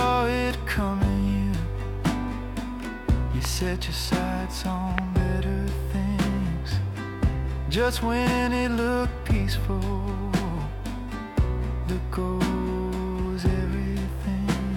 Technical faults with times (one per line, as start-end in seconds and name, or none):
3.45-3.47 loud pop
4.98-5.00 loud pop